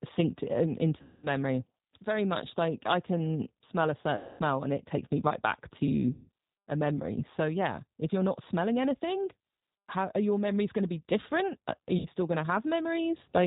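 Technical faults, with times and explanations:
Throughout: G.729 codec. Nothing above 4 kHz survives, and the speech sounds rough and synthetic. This fits G.729A at 8 kbit/s, which rebuilds speech from a vocal tract filter and sparse pulses.
1.02–1.27 s, 4.16–4.42 s, 6.13–6.29 s, 11.99–12.08 s: VoIP packet loss concealed by the speech codec. The gaps fall after "synced in", "I can smell a" and "takes me right back", and last 60 to 240 ms. The decoder repeats its last pitch and filter, so the sound smears into a fading buzz or coloured noise. It recovers weakly afterwards.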